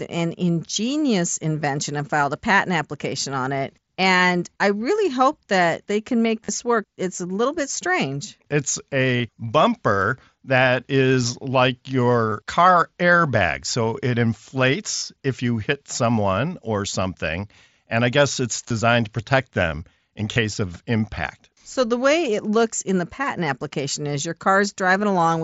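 Concealed Bluetooth headset packet loss occurs at 6.45, 9.17, 12.3 (after "bumper that is like"), 14.97, 18.68 and 20.34 s. Gaps of 22.5 to 52.5 ms are patched by repeating recent waveform, giving a brief buzzy held tone and slight warble rather than a silent dropout.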